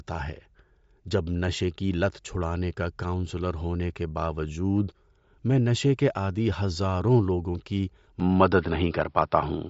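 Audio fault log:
throughout: Bluetooth LC3 compression, likely cause. A low-rate LC3 link, fitting about 32 kbps with 10 ms frames, strips everything above 7.7 kHz, leaving grainy, breathy speech.
8.2–9.7 s: input switched to a poorer device, likely cause. Right after "عادی ہزاروں لوگوں کی", capture jumps to a narrower-band device with no gap. Speech dulls above 5.5 kHz, the level shifts by about 5 dB, and a faint new noise floor appears.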